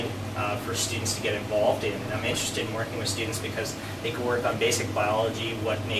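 No technical faults are audible anywhere in the clip.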